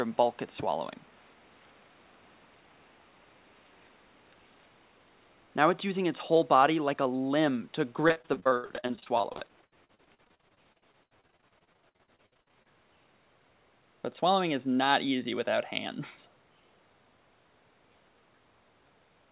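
From 8.08 to 12.67 s the sound turns choppy and robotic, with dozens of short holes, none much over 70 ms, each bridged by stretching the previous sound. This is repeated packet loss on the call path, with about a third of that stretch concealed. The whole clip stops near 4 kHz, as G.711 A-law does.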